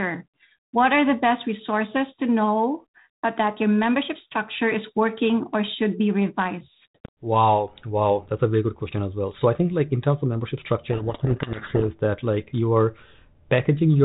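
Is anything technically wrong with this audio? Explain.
Yes. From 10.9 to 11.89 s, just after "in terms of membership" and ending before "that like you are", there is a codec payload misread. The two ends disagreed on the bit order within each G.726 code word, so the decoder read every 4-bit difference value with its bits swapped around and rebuilt the wrong waveform from them. The speech in that stretch is buried under harsh, grinding distortion, which stops once the correct bit order returns. The surrounding 32 kbit/s G.726 audio stays band-limited below 4 kHz.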